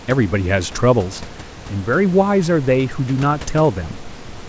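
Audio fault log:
No faults are heard in this speech. Room noise sits about 17 dB below the voice, and the call path leaves nothing above 8 kHz, which fits a G.722 codec.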